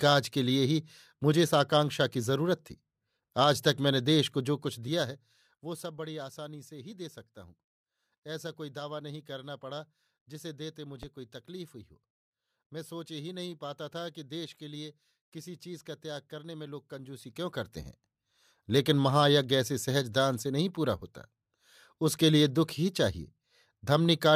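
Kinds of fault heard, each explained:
Zipper noise: The level was moved in coarse steps with no smoothing between them, about 50 steps a second, so each jump leaves a tiny click in the waveform. In this speech clip it shows twice, as a fast ticking or zipping laid over the voice: from 4.46 to 5.94 s while the level drops by roughly 15 dB, and from 16.98 to 17.92 s while it comes back up by a similar amount.
Loud pop: A single sudden pulse was added to the signal at 11.03 s, lasting under 40 ms and peaking at around 15 dB above the surrounding speech. It is heard as one sharp pop sitting on top of the voice, which carries on unbroken beneath it. A pulse like this most likely comes from an electrical event such as a plug, switch, static discharge or driver glitch, rather than from the recording itself.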